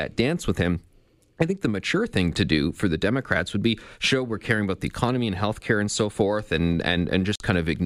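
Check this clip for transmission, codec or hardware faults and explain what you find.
One fault is present: a Bluetooth stall near the end of the speech, from 7.35 to 7.40 s. The audio drops to dead silence for about 47 ms, then carries on. The likely cause is radio interference delaying packets until the headphones' buffer emptied, with playback halting until the retransmissions caught up. What separates this from ordinary packet-loss concealment is the true silence: there is no smeared, repeated or buzzy fill in the gap, just a clean pause before the sound resumes.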